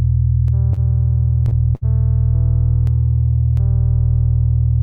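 The audio shows two short stalls from late packets and one burst of packet loss. The stalls come at 0.73 s and 1.49 s. Each time a packet was late, the jitter buffer ran dry, and the receiver held the last sound for about 31 ms and 26 ms before carrying on from the same point. Nothing is lost, but each sound hangs slightly too long with a faint buzz or dip, and playback falls 31 ms and then 26 ms further behind. On a spectrogram these appear as brief stretches of frozen horizontal bands. In the waveform they look like a short repeated cycle shape. The burst of packet loss runs from 1.75 to 1.84 s. About 62 ms of concealment fills in for roughly 60 ms of audio that never arrived. The last sound is extended and fades, turning into a held buzz or thinning hiss. Then the audio jumps ahead with that stretch missing. A spectrogram shows frozen bands dimming into a gap before the content changes abruptly, and the waveform envelope decays and then resumes with a discontinuity.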